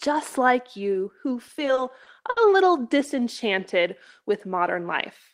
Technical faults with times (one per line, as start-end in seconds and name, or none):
1.47-2.38 repeated stalls (stutter)